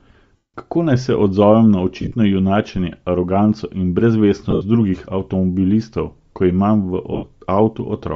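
Across the whole speech clip runs a breathy, grainy edge on the upper band, plainly audible, most likely from Bluetooth LC3 compression at a low rate near 32 kbps. Noise fills the emptied high spectrum, unlike the swirly artefacts of MP3.

Lost LE Audio frames follow. From 0.36 to 0.54 s, a solid 180 ms gap turns into a noisy smear that fades. Shorter, scattered dropouts land at 2.01 to 2.14 s, between "naj se odzovem na" and "junačenje aroganco in", with runs of about 40 ms. They recur at 4.50 to 4.61 s, before "drugih avtomobilistov ko", and at 7.13 to 7.27 s, with runs of about 70 ms. The decoder repeats the last spectrum with random signs, so each gap comes out as a hiss-like smear rather than a clean click or mute.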